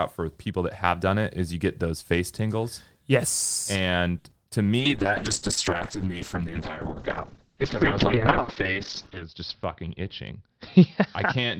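At 4.18 to 4.25 s there is a short stall from a late packet. A packet arrived late, the jitter buffer ran dry, and the receiver held the last sound for 60 ms before resuming at the same point. Nothing is lost, only stretched, and the delay grows by 60 ms, unlike a true loss.

Just after, at 4.30 to 4.32 s, comes a short concealed packet loss. Here 10 ms of audio never arrived and was replaced by an extrapolated continuation of the preceding sound. It is heard as a tiny smear or wobble rather than a hold, because real content is gone.

From 4.79 s to the end, a call bitrate drop takes the encoder from 40 kbps to 7 kbps, with the bandwidth narrowing from 20 kHz to 6 kHz. The speech turns muffled and rough, staying at the lowest rate for about 4.4 s. It is a lasting change of tone, not a brief glitch.

From 9.68 to 10.32 s, a jitter buffer speed-up trims roughly 70 ms of pitch-period fragments to cut excess delay. 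The speech runs at 108% speed but keeps its pitch. It sounds hurried, which separates it from the bitrate drop.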